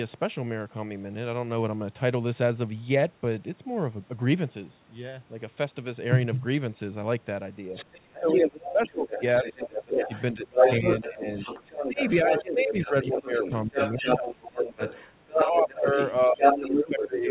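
An echo canceller that likely failed to clear the far end's loudspeaker sound from the microphone lets the other side's voice leak through from 7.73 to 15.74 s. It sits at roughly the same level as the talker, a second voice mixed in over the narrowband 4 kHz call audio.

With both sides talking at once, the canceller likely could not separate its own talker from that echo. The result is speech suppressed in double talk from 8.09 to 14.81 s, with the talker dipping by as much as about 20 dB over roughly five seconds in total.

The same double-talk suppression returns from 15.32 to 17.29 s. It is shallower, at about 15 dB at its deepest and around a second and a half in all.

Overlapping it, from 16.09 s to the end, the other side's voice leaking through likely comes from the same incomplete cancellation. This time it is somewhat louder than the talker, so the echo briefly dominates.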